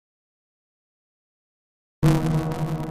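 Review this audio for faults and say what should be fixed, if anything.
A block size mismatch (truncated) runs through the whole clip. A steady buzz at 172 Hz sits under the audio, and everything plays about 1.88 times too fast while holding roughly its normal pitch. One stage is writing longer blocks than the next stage reads, so the tail of every block is discarded. The buzz rate fits a 256-sample read, with the writer's blocks close to double that. The band-limiting to 4 kHz is simply the G.711 mu-law call path. To prevent the fault, make the producing and consuming stages agree on one block size, or put a buffer between them that carries over leftover samples instead of dropping them.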